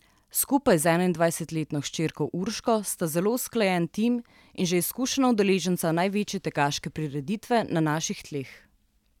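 No technical faults can be heard in the speech.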